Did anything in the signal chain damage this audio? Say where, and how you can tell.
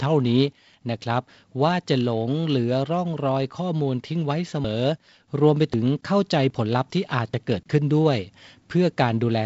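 Yes, at the driver/buffer stage: the speech jumps ahead at 4.64, 5.74, 6.50 and 7.34 s. These are likely dropped buffers (overruns), losing roughly 70 ms twice, then 20 ms twice.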